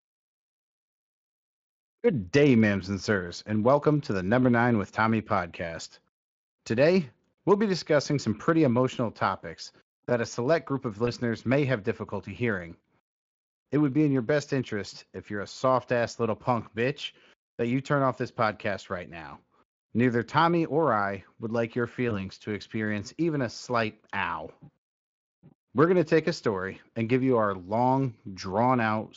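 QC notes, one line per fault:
11.05–11.10 s and 22.09–22.25 s, VoIP packet loss concealed by the speech codec: each time what sounds like one missing 20 ms speech frame was filled in by the decoder. It repeated the last pitch and spectral shape at falling gain, so the speech briefly smears into a buzzy tone or coloured noise that fades. The second dip lasts longer, about 160 ms, because recovery stays weak or distorted until the predictor resettles on the light Speex-coded stream.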